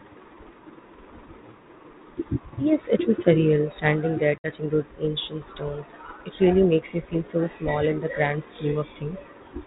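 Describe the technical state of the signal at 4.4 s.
Packet loss on an ADPCM call runs from 4.38 to 4.50 s. About 60 ms of the 32 kbit/s G.726 stream, a few packets' worth, drops to abrupt silence. The decoder's predictor and step size then fall out of step with the sender's, so the speech returns with brief, slight distortion before settling.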